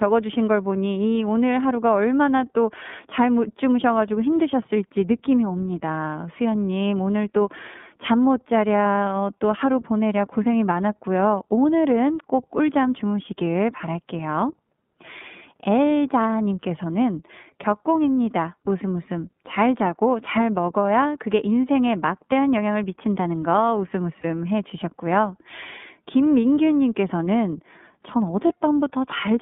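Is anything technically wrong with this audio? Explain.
Yes, the speech carries two related faults.

Throughout, the iLBC codec's narrowband coding confines the sound to roughly 150 Hz to 3.6 kHz and leaves a rough, slightly synthetic edge. Its 30 ms independently coded frames fit iLBC's 13.33 kbps mode. A spectrogram shows a hard ceiling with nothing above 3.6 kHz.

At 24.21 s and 28.47 s, lost iLBC frames each drop one 30 ms frame. The decoder fills each gap by repeating the last pitch cycle blended with noise, so it sounds like a brief held, buzzy vowel. A waveform shows a short stretch of periodic repetition.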